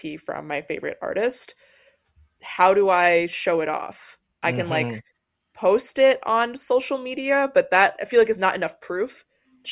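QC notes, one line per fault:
No fault found.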